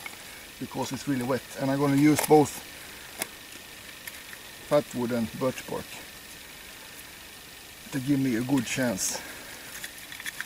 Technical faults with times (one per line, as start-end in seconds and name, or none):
none